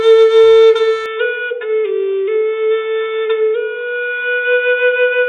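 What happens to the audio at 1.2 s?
From 1.06 s to the end, the sound goes dull and boxy with nothing above 3.8 kHz, and it's a bit quieter, likely an input switched to a poorer device.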